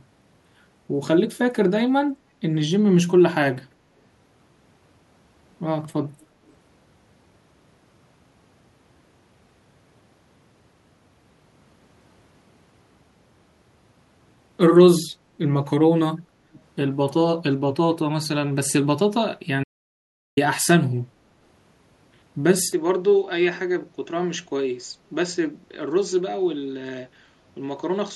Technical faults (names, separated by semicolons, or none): echo leak; audio dropout to silence; input switched to a poorer device